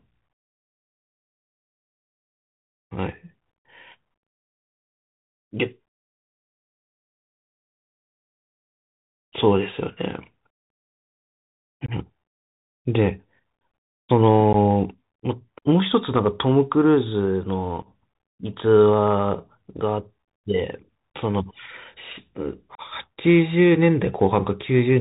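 Speech sent over a Bluetooth CVSD headset codec is cut off above 4 kHz, with s sounds turned scratchy and a granular hiss underneath throughout. Unconcealed Bluetooth headset packet loss drops short runs of headset packets and leaves abrupt holes of 22.5 ms at 11.86 s, 15 ms at 14.53 s, 7.5 ms at 17.82 s and 30 ms at 22.75 s. After each hole the speech returns briefly quieter.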